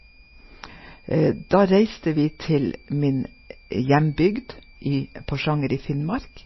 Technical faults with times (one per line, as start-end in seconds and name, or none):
0.00-6.46 switching supply whistle
0.00-6.46 MP3 compression